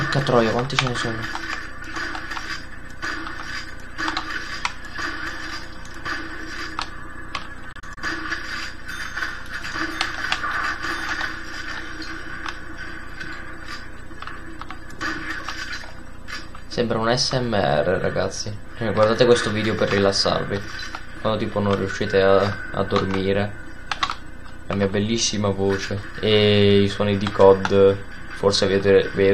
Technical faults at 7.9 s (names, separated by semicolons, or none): digital broadcast dropout